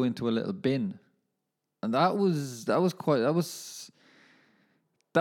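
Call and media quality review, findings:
No audible defects found in the speech recording; nothing to escalate on this item.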